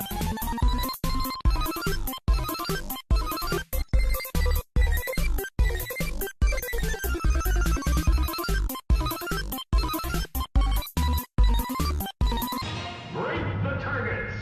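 No technical faults can be heard anywhere in the recording. Nothing interrupts or disturbs the sound at any point.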